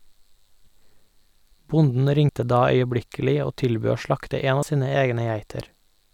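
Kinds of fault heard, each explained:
Compressed frames skipped: at 2.29 s and again at 4.62 s, between "tilbød å slakte en" and "av sine", the speech jumps forward by about 30 ms, which fits roughly one 32 ms frame of the compressed stream going unplayed, either missing or rejected by the decoder as damaged. At each join a sliver of the speech is simply absent.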